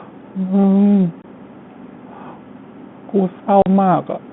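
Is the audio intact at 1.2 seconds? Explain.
No. From 1.22 to 1.24 s the speech has a packet loss filled with silence: a 20 ms stretch of the stream never arrived, which fits a single lost packet, and the receiver played nothing in its place. You hear a short, dead gap with hard edges where the sound stops and restarts. That true silence sets it apart from concealed loss, which would bridge the hole with repeated or smoothed sound instead.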